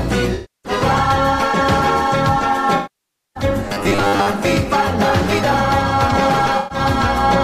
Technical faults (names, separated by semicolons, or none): AAC frame loss with concealment; robotic sound from repeated short buffers